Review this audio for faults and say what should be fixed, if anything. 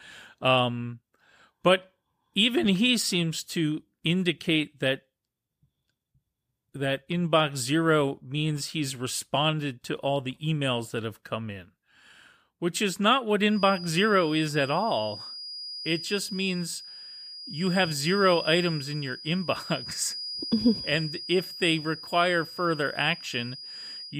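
A feedback whistle starts at 13.47 s, after "which is not what", and lasts to the end. It is a thin 4.9 kHz tone about 15 dB below the speech, swelling and fading slowly in level. A loudspeaker-to-microphone loop is likely sitting just at the feedback point. To prevent it, reduce monitor gain near the microphone or notch out 4.9 kHz.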